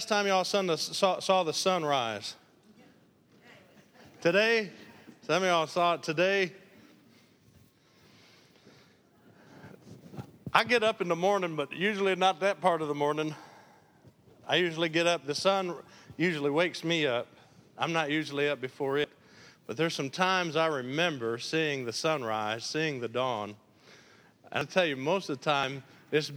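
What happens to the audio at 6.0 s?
Nothing goes wrong at 6.0 s; the audio plays through that moment intact, with no dropout, click, distortion or other fault.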